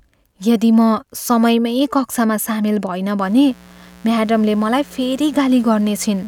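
From 3.21 s to the end of the speech, a mains buzz sits under the sound. Sharp switching spikes from a dimmer, rectifier or unshielded cable have leaked into the signal. They come twice per 60 Hz cycle. That builds a dense stack of 60 Hz harmonics reaching into the kilohertz range. The result is a steady, raspy buzz rather than a smooth hum. It sits roughly 25 dB below the speech.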